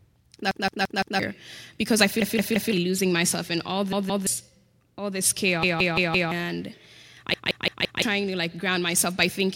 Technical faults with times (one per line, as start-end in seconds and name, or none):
0.51-1.19 repeated buffer
2.22-2.73 repeated buffer
3.93-4.27 repeated buffer
5.63-6.31 repeated buffer
7.34-8.02 repeated buffer